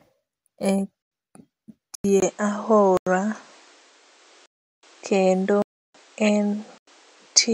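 At 1.02 s and 1.95 s the speech drops out in a block of digital silence about 93 ms long, which fits an unfilled 4096-sample output buffer. Each gap is a short hole. On the waveform it is a near-flat line with abrupt walls.

From 2.20 s, after a 20 ms silence, the sound turns duller and shifts level by about 5 dB, with new noise roughly 35 dB below the speech. The likely cause is an input switched to a poorer device. The spectrogram shows an empty band above 9.1 kHz.

The same blocks of digital silence recur at 2.97 s and 6.78 s (about 93 ms each), at 4.46 to 4.83 s (about 372 ms, which fits a 16384-sample buffer) and at 5.62 to 5.94 s (about 324 ms). On the spectrogram they appear as vertical blank strips.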